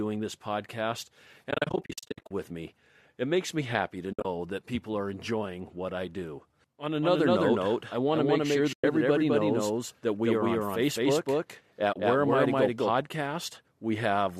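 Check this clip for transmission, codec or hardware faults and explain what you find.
Two faults are audible: repeated dropouts from AAC frame loss with muting, and a doubled audio track through the second half of the speech.

AAC frame loss with muting: the speech drops into soft-edged silent holes, fading out and back in. From 1.51 to 2.31 s, between "this podcast" and "with me", about 540 ms goes missing in gaps scattered over 800 ms, the longest around 70 ms. Briefer holes follow at 4.13–4.25 s (about 100 ms, between "makes me happy to" and "that people are enjoying"), 8.73–8.84 s (110 ms) and 11.93–11.96 s (30 ms). Lost codec frames were replaced with silence, and the overlapping decoder windows smoothed each edge.

Doubled audio track: from 7.02 to 12.90 s a second, full-band copy of the speech trails the original by about 200 ms at roughly equal level. It sounds dry, with no reverberant tail, and starts and stops abruptly. 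The likely cause is a second, slower capture path or an edit leaving two misaligned copies.

The likely low-delay AAC coding underneath shows only light roughness.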